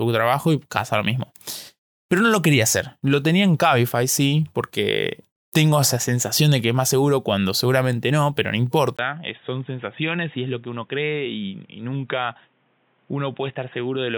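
Input switched to a poorer device at 8.97 s, just after "seguramente no pero no", lasting to the end of the clip. A gap of about 20 ms marks the switch, and then the speech turns dull and boxy, with nothing above 3.8 kHz. The level falls by roughly 5 dB, and a new background noise sits around 40 dB below the speech. This band-limited sound likely comes from the recording input changing to a narrower-band microphone or headset mid-take.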